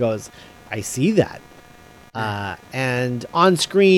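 Throughout the speech runs computer activity noise, a faint buzzy chirping pulsing around 200 times a second, about 30 dB below the voice, following processor load through shared ground rather than steady mains hum.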